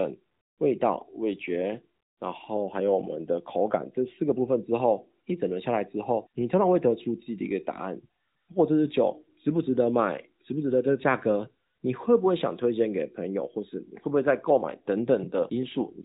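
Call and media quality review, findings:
No findings in this call and media quality review: no fault to report in the speech.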